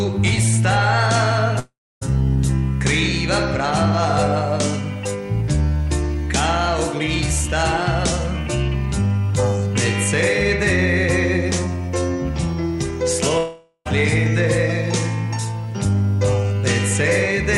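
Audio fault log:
1.59–2.03 s and 13.38–13.87 s, long network dropout: the sound smears into a fading buzz, then goes quiet (about 280 ms the first time, only 60 ms the second) and resumes with roughly 0.42 s and 0.48 s gone, likely from packets never arriving.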